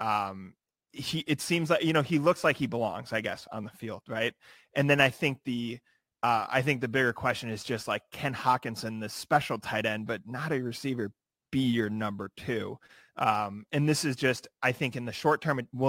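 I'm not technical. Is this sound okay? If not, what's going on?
No. From start to finish the speech has a crude rate conversion fault: its sample rate was changed by simply dropping samples, which fits a 48 kHz to 44.1 kHz conversion done without proper filtering. This adds a gritty, fizzy buzz that follows the louder, brighter sounds.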